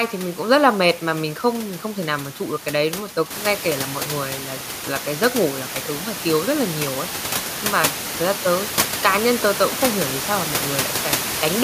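Nothing stood out as a technical fault on listening to this speech; the only change is the room's own background noise, which rises by about 10 dB at around three and a half seconds and then sits about 9 dB below the speech.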